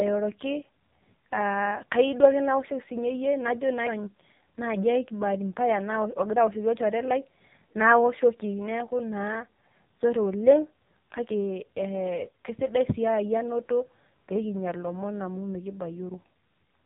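From start to finish the speech carries heavy AMR narrowband mobile codec damage. Nothing above about 3.8 kHz survives, so sibilants and consonant edges are dull and boxy. The voice is rebuilt from a coarse vocal-tract model excited by sparse pulses, and with so few bits it comes out buzzy and synthetic. That degree of damage fits one of the low AMR-NB modes, around 6 kbps.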